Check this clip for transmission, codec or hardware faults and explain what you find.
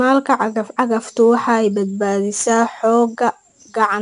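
One codec fault runs through the whole clip: 4-bit ADPCM compression. Each sample is coded as a coarse 4-bit step from a predicted value, with the step size adapting as it goes, so the quantisation error rides along with the speech as noise that rises and falls with its level. This is plainly audible as gritty hiss on louder passages and roughness on sharp onsets. Nothing reaches above 10.6 kHz, which dulls the top end and fits a rate near 89 kbps from a 22 kHz sample rate.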